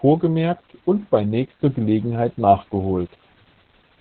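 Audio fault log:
throughout, Opus voice compression: the speech is muffled, hoarse and a bit robotic, with nothing above about 4 kHz, which sounds like narrowband SILK at around 8 kbps.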